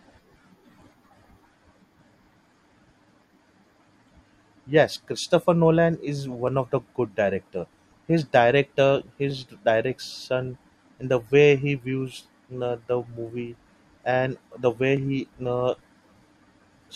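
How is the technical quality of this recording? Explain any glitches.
There's a recurring glitch in this speech clip: a click roughly every 1.42 s, running from about 0.82 s to 16.38 s, around ten in all. That steady spacing points to clock drift buffer slips, most likely two devices running on separate clocks that disagree by something like 500 ppm. The buffer between them creeps until a few dozen samples get dropped or repeated, and each slip lands as a short tick under the voice.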